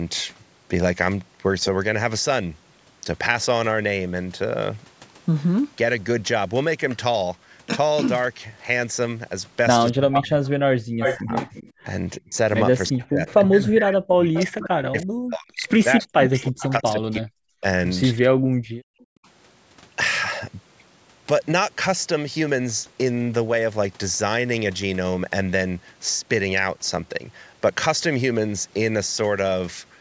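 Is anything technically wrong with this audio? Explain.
Yes. There are two faults.

From 9.91 to 19.27 s there is speech suppressed in double talk. The speech dips and cuts out in pieces, about five seconds in all. At its deepest it falls by about 40 dB. The likely cause is both sides talking at once. The echo canceller could not tell the near talker from the loudspeaker echo, so it turned everything down.

There is also echo leak, at 10.13 to 11.72 s, 14.36 to 15.04 s, 16.01 to 16.69 s and 19.0 to 19.05 s. A delayed copy of the speech comes back 341 ms, 374 ms, 374 ms and 331 ms late. The first is loud, only a few decibels below the speech. Each later one is fainter, and the last is about 35 dB below the speech. This is likely a loudspeaker on one side whose canceller failed to remove everything its microphone picked up.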